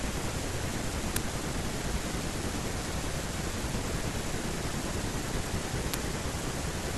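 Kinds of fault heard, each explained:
Uninitialised buffer: at 1.16 s and again at 5.94 s, a block of about 5.3 ms was sent to the output before any audio had been written into it, so whatever stale values sat in that memory were played as samples. In this speech clip each one breaks through as a brief, loud crack, and the length of each crack fits a 256-sample buffer being played out unfilled.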